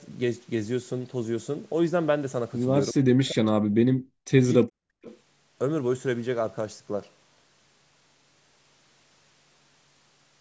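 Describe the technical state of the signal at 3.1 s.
Speech suppressed in double talk, 2.93 to 4.08 s: an echo canceller, likely confused by both sides talking, turns the voice down by about 40 dB.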